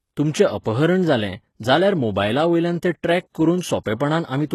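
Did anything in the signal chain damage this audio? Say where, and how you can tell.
Yes. The codec stage likely ran HE-AAC compression at a low bitrate, around 16 kbps. Treble is synthesised from lower bands and stops at 12.3 kHz, and the codec damage is plainly audible.

The same codec causes pre-echo from 0.62 to 0.66 s. Block-spread quantisation noise leaks 34 ms ahead of an attack, hissing before it and smearing it.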